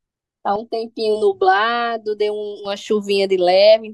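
From 0.56 to 2.65 s the speech turns hollow and phasey, thinned by fixed notches starting around 200 Hz and repeating evenly upward. This is channel delay (comb filtering): one channel lags the other by roughly 3 ms, and summing them to mono cancels those frequencies.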